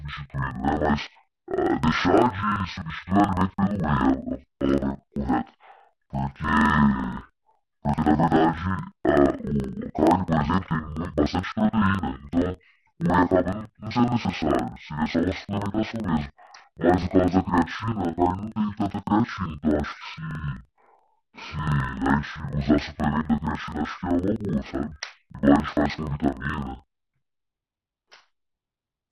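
Speech clip with interleaved audio read as planar throughout: each 42.67 ms block, which fits a 2048-sample buffer, is split into half-speed left and right halves played together, so the voice sounds an octave low, doubled, and choppy at 23.4 Hz.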